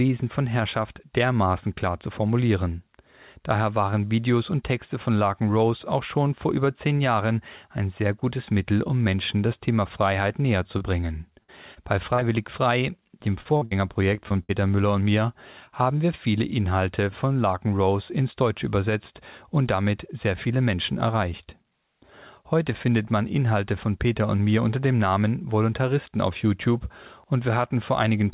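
Call audio with a run of dropouts from about 10.8 s onward, all band-limited to 4 kHz in a way that points to a narrowband G.711-style call path. Short concealed packet loss shows up at 10.78, 11.01, 11.74 and 12.14 to 12.23 s: the receiver papers over 20 to 40 ms holes by extending the last sound, leaving small smears or wobbles. At 11.43 to 11.50 s there's a burst of packet loss, about 60 ms gone, heard as a held, fading stretch before the audio picks up further along. Then from 13.41 to 14.51 s comes repeated packet loss with a robotic sound: seven gaps, the longest about 59 ms, with about a quarter of that span patched over, so it turns choppy.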